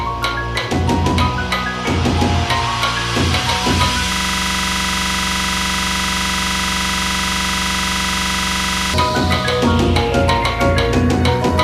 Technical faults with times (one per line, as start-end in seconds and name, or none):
4.13-8.94 system hang loop